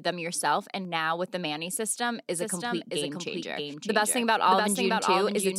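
A second capture path, likely a slower one feeding the same speech into the mix, produces a doubled audio track in this speech clip from 2.39 s, just after "system is", to the end. A full-band copy trails the original by roughly 0.7 s, sitting a few dB below it, around 5 dB quieter. It arrives with no reverberant tail or room colouring and switches in abruptly.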